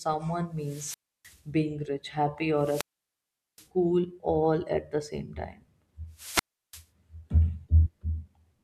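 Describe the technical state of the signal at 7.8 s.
At 7.8 s the speech signal is intact, with no audible technical fault at that moment.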